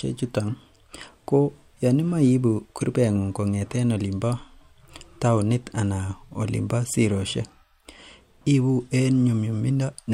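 No technical faults can be heard anywhere in the speech.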